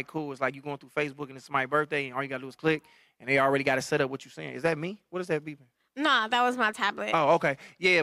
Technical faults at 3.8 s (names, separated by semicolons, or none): none